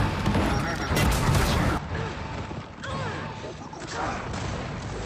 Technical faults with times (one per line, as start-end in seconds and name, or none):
1.77-5.05 input switched to a poorer device